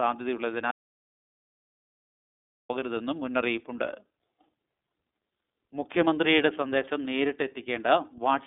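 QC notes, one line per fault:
throughout: iLBC codec, sound band-limited to about 250 Hz to 3.6 kHz, nothing above 3.7 kHz, plainly rough and synthetic, fitting 13.33 kbps 30 ms frames, not mere lowpass filtering.
0.71–2.69 s: audio dropout to silence, a 1.98 s gap of silence with no room tone, likely lost input, unlike concealed packet loss, which fills gaps.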